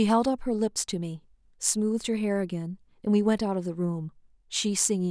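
No faults can be heard anywhere in the recording.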